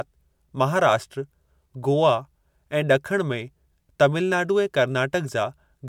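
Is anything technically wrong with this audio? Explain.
No, nothing is technically wrong.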